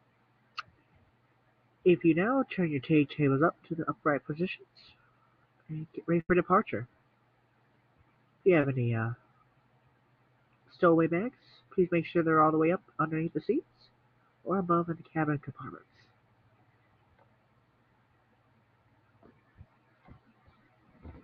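At 6.20 s to 6.30 s there is a burst of packet loss: roughly 90 ms of audio failed to arrive in time, and the receiver covered about 84 ms of it by extending the last sound and fading it down. It comes across as a brief held buzz or hiss that sags, then a jump ahead. On a spectrogram the harmonics or noise freeze into flat horizontal bands that dim; the waveform shows a sustained, shrinking envelope before an abrupt resumption.

From 8.61 s to 8.64 s comes a short concealed packet loss, about 20 ms missing and roughly 21 ms filled by continuing the preceding sound and crossfading back into the real signal. Because the patch is so brief, it is heard as a small smear or wobble rather than a gap, and a quick transient there may simply vanish. A spectrogram shows a thin vertical slice of slightly blurred, smoothed texture; the waveform shows a short continued stretch with a subtle seam where real audio rejoins.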